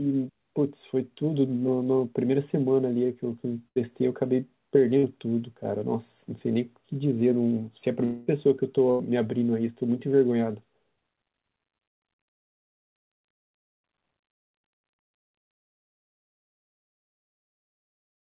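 At 3.68 to 3.78 s and again at 4.98 to 5.05 s, a burst of packet loss removes about 80 ms and then 60 ms of speech. The receiver stretches the last sound into a fading buzz or hiss before speech resumes further on. On a spectrogram, each gap shows smeared, repeating bands that dim, followed by an abrupt onset.

From 8.05 to 8.29 s there is a held, decaying buzz or hiss covering about 220 ms. It never drops to silence. This is likely a long network dropout, concealed for its whole length. The waveform shows a repetitive, shrinking envelope, and the spectrogram shows frozen, fading bands instead of a blank region.

At 8.91 to 9.01 s another burst of packet loss drops about 80 ms, with the same fading fill. Throughout the clip, the spectrogram stops cleanly at 4 kHz, which points to a narrowband call codec such as G.711.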